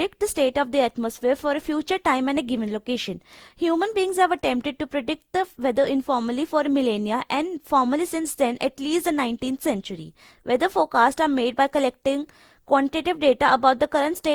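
Throughout, generation loss from likely around seven Opus-style re-encodes near 64 kbit/s leaves the speech swirly, hollow and smeared, its attacks blurred.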